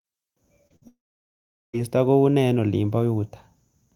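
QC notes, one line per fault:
0.67–0.72 s, short concealed packet loss: a brief smear in the speech where about 20 ms never arrived in time. The receiver bridged it with about 26 ms of synthesised continuation of the preceding sound, then cross-faded back into the real signal, leaving a small wobble.
0.76–0.84 s, burst of packet loss: about 60 ms of consecutive audio lost. The decoder extended the last sound for about 55 ms, attenuating it as the gap ran on, so a short held buzz or fading hiss replaces the speech. Playback then resumes with that stretch gone.
0.88–1.75 s, long network dropout: the speech trails off into a brief fading continuation, then about 770 ms of silence before it returns at "koune eng olin". About 860 ms of audio is missing, likely because nothing arrived and the concealment gave out after its initial fill.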